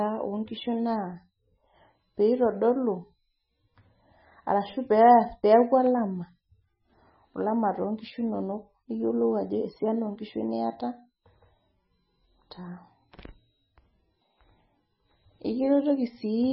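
Speech runs the whole way through with nothing above 5.6 kHz, and it sounds watery and swirly, with s sounds chirping metallically and onsets smeared. The likely cause is heavy MP3 compression at a very low bitrate, around 16 kbps. A spectrogram would show a hard ceiling and flickering holes where weak bands drop out.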